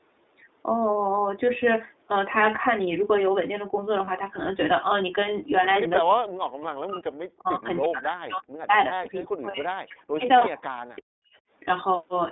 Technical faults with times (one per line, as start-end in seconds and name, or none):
0.00-12.32 iLBC codec
4.05-4.09 lost iLBC frames
6.01-11.32 speech suppressed in double talk
9.50-9.55 lost iLBC frames